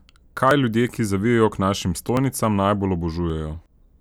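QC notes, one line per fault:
0.51 s (before "ljudje ki zavijejo k"), 2.17 s (after "ki zavijejo k našim") and 3.30 s: dropped buffer (overrun). Each is a jump where the speech skips ahead by about 10 ms. Likely the buffer was overwritten before it was read.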